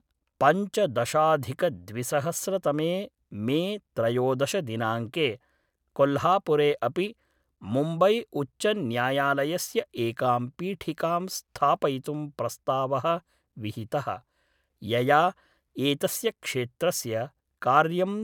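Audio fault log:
No audible faults on this speech recording.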